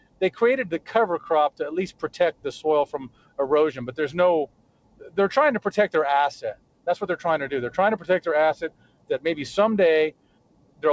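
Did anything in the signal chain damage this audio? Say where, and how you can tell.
Yes. The damage happens in call processing. A noise suppressor built for speech was left running on this sound. Level swings by roughly 20 dB, with onsets passing while sustained parts and tails sink. The suppressor treats steady content as noise. The call path's band limit at 8 kHz sits underneath.

Sound cut by the noise suppressor is audible at 0.00–0.21, 1.91–2.08, 2.86–3.39, 4.46–5.18, 6.54–6.87, 8.62–9.10 and 10.11–10.83 s. In each, the sound drops by about 18 to 19 dB because the suppressor judged that stretch to be noise and turned it down.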